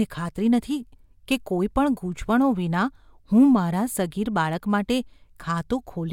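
No audible technical faults occur anywhere in this speech recording.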